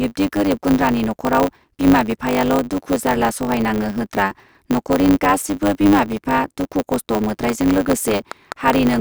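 From the start, there's a block size mismatch with truncation: each block's tail gets dropped, giving a steady 100 Hz buzz and speech running about 1.09 times fast with its timbre intact. Then from 7.49 to 8.95 s comes a train of clicks, about seven regular pops at 4.44 per second, roughly 10 dB above the speech. That's likely interference or a faulty connection or power supply.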